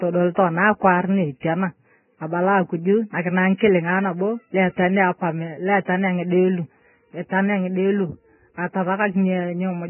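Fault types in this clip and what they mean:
Vorbis compression: The speech is band-limited with nothing above 3 kHz, and what remains is heavily damaged: hissy, grainy texture, roughened vowel tones and smeared consonant onsets throughout, likely from Vorbis coding at a very low bitrate, around 10 kbps. The grain is noise of similar energy replacing fine detail above a smooth spectral floor. A plain low-pass filter would sound dull but clean, and MP3 damage tends toward metallic swirling rather than this diffuse hiss.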